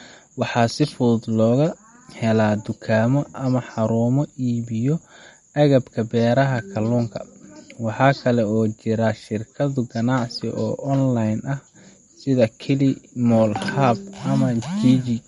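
Throughout the speech, plainly audible MP3 compression damage is present, likely from encoding at a bitrate near 48 kbps. A spectrogram shows a hard ceiling at 11.1 kHz with nothing above, plus flickering holes in the upper bands; s sounds turn watery and swirly.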